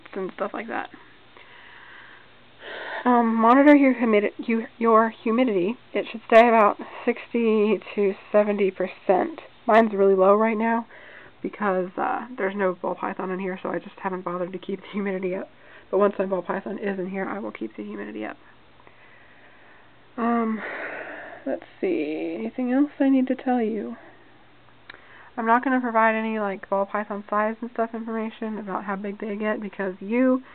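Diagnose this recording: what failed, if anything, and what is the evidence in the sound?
Playback applied de-emphasis wrongly from 9.87 s onward: the treble slopes smoothly down, about 13 dB at 10 kHz, leaving the sound dull and muffled.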